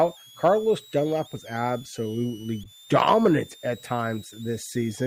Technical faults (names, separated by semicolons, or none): switching supply whistle; corrupt frame decoded